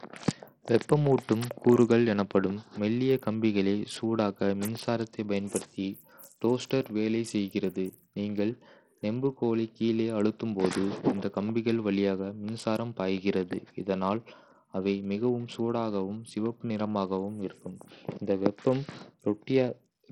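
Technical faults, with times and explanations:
Throughout, Bluetooth SBC compression: treble flickers and drops out under gritty grain, likely an SBC stream starved of bits, which fits a heavily squeezed 64 kbps link.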